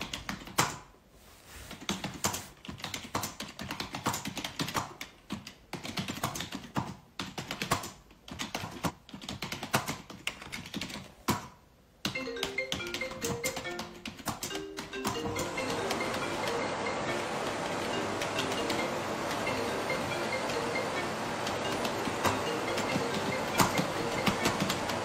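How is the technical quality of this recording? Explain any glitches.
The recording has three brief glitches; each is a frames out of order fault. At 8.63–8.91 s, 16.44–16.80 s and 21.60–21.94 s the sound turns into a short garbled flutter. Two adjacent runs of decoded frames played in swapped order, so each stretch's halves are exchanged: about 128 ms blocks in the first, about 171 ms in the others, which fits runs of three and four frames. Nothing is lost, only reordered.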